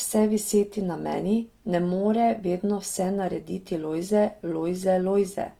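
Throughout the clip, the speech has a grainy, rough, noisy texture, while the bandwidth stays full, reaching about 20.2 kHz. The cause is likely Opus compression in its CELT music mode, filling bit-starved bands with folded or noise content, at a rate pointing to roughly 24 kbps.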